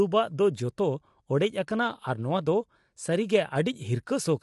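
A speech clip with plainly audible coding damage throughout, and nothing above 11.6 kHz. The likely cause is low-delay AAC compression. Its short frames resolve pitch harmonics poorly and spend more bits. The damage points to roughly 32 kbps.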